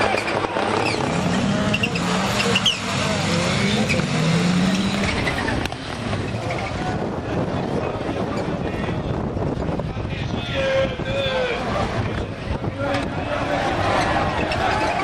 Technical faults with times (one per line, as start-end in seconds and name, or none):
0.00-15.04 sample clock jitter